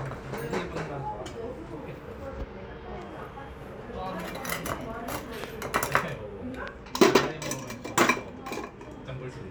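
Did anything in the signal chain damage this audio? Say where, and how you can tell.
Yes. Two loud pops sit on top of the sound, at 5.44 to 5.46 s and 6.68 to 6.70 s. Each is a single sharp spike, roughly 15 dB above the surrounding audio, which continues underneath. The likely cause is a voltage step in the analogue wiring, such as a plug, switch or static discharge.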